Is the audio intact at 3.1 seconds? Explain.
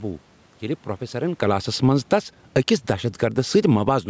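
No. At 3.1 seconds the speech is partway through a steady fade, and the room noise behind it is sinking by the same amount. This is automatic gain falling, running from 1.15 to 4.04 s. The automatic gain control judged the input too loud, or its background noise too strong, and kept lowering its gain, by about 12 dB across that span. Because the whole signal is scaled down, speech and background drop together.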